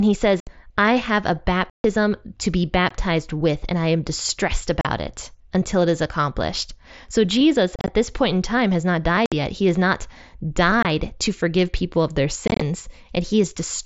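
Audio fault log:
0.40–0.47, 1.70–1.84, 2.89, 4.81–4.85, 7.76–7.88, 9.26–9.32, 10.83–10.85, 12.48–12.61 s, unconcealed Bluetooth headset packet loss: lost headset audio is left as hard-edged silent gaps. On a spectrogram these show as vertical blank bands beneath the mSBC 8 kHz ceiling, and on a waveform as flat-line cuts. The gaps at 7.76 and 12.48 break into choppy clusters.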